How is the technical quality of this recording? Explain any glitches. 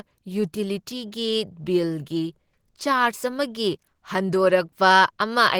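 The technical quality is compromised by one fault present throughout the clip: Opus compression, with damage that is plainly audible across the whole recording.

The likely cause is Opus coding at a low bitrate, which fits roughly 16 kbps, running in its hybrid mode. That mode codes the lower band with the speech coder and the upper band with the music coder. With so few bits, the fine detail of the speech is approximated rather than kept, leaving the speech muffled and hoarse. The bandwidth itself stays full, with content reaching about 20.2 kHz.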